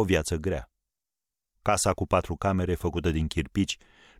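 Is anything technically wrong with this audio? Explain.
No, nothing technically wrong stood out on listening to this speech clip.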